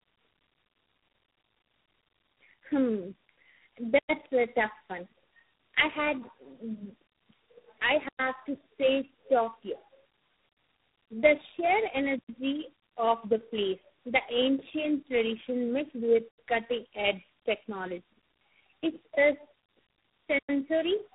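From start to finish the speech carries tandem speech coding: it passed through three low-rate speech codecs in succession, G.729A at 8 kbit/s, AMR-NB at 7.4 kbit/s and G.726 at 24 kbit/s, with G.711 links between them. Each coder re-encodes the previous one's errors, so the result is rougher, more muffled and more warbly than a single codec would leave it, with nothing above 3.8 kHz.

A gap between chunks then appears five times, at 3.99, 8.09, 12.19, 16.29 and 20.39 s. Each is a 100 ms hole, recurring about every 4.1 s. That spacing points to the audio being handled in 4.0 s chunks, with silence inserted at each join rather than content dropped.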